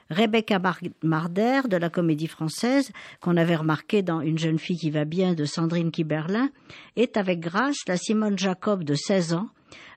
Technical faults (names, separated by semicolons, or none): adaptive stream at a lower bitrate